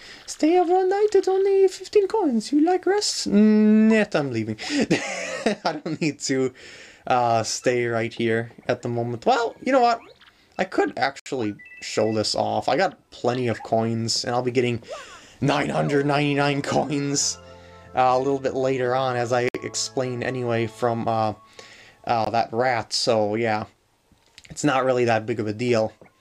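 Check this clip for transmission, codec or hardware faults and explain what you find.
Three blocks of digital silence interrupt the clip. At 11.20 to 11.26 s, 19.49 to 19.55 s and 22.25 to 22.27 s, the output buffer evidently went unfilled in time and stretches of samples were written as zeros, lasting about 65, 60 and 20 ms. The sound cuts to dead silence and back with no fade. The first two are heard as short holes, the last as a briefer one.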